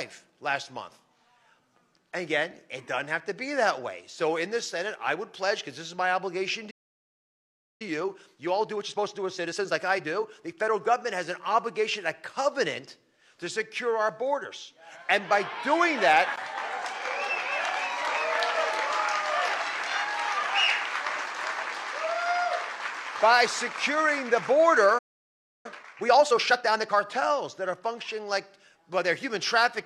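At 6.70 s the player most likely ran out of buffered data or had its thread blocked, causing a playback stall: the sound cuts off mid-flow and stays silent for about 1.1 s before resuming at 7.82 s. A second stall of this kind, probably from the same starvation, silences the audio from 24.98 s to 25.66 s.

After each stall the player works off its backlog through time-compressed catch-up, removing small slices and cross-fading the joins. From 7.82 s to 10.82 s the audio runs at 1.15 times normal speed, and from 25.66 s to 26.98 s at 1.5 times, hurried but at its original pitch.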